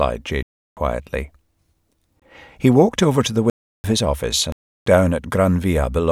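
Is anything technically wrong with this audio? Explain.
Yes. The speech has four blocks of digital silence: 0.43–0.77 s, 2.20–2.22 s, 3.50–3.84 s (after "walked over to the", before "his office"), and 4.52–4.86 s (right after "his office"). The output buffer went unfilled and was zeroed. The three 341 ms holes fit a 16,384-sample buffer, and the 23 ms one is a brief gap. Each drops to silence and back with no fade. Concealed packet loss would fill the gap instead of leaving dead silence.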